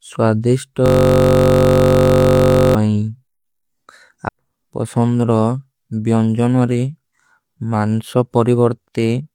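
From 0.86 to 2.75 s the audio freezes into a system hang loop: the output keeps replaying one 21.33 ms slice, consistent with a 1024-sample ring buffer, 88 times over. At 46.9 Hz that repetition fuses into a steady buzz rather than a stutter, and unlike a dropout nothing goes silent.

At 4.25 to 4.29 s the speech jumps abruptly forward with a brief blip, which points to a stream segment skipped, likely a segment that failed to load while the player carried on with the next. Unlike a dropout there is no silent gap; the material simply resumes further along.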